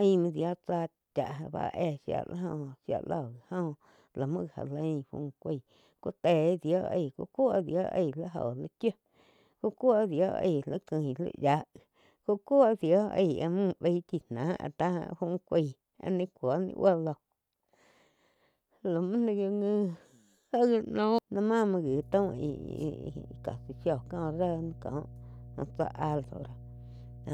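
A speech recording with mains hum from 21.87 s, just after "já ma muo", until the end at 27.34 s. It is a steady 60 Hz tone about 20 dB below the speech, fixed in pitch and level, unlike wind or handling rumble, which wanders. A ground loop or nearby transformer is coupling power-line current into the signal.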